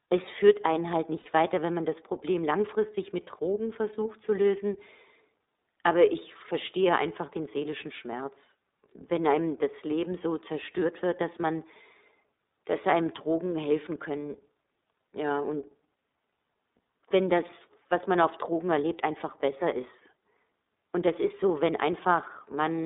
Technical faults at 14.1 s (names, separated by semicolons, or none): iLBC codec